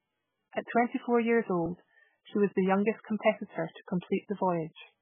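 A speech clip with heavy MP3 compression from start to finish: nothing above 3.5 kHz, plus watery, swirling artefacts, likely from a very low bitrate around 8 kbps.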